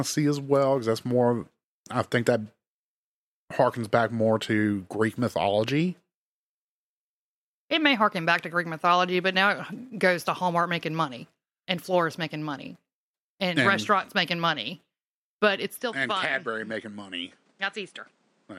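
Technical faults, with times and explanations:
15.80 to 18.59 s, input switched to a poorer device: likely a mid-recording device change, cutting everything above 10.5 kHz, dropping level about 5 dB and adding new background noise.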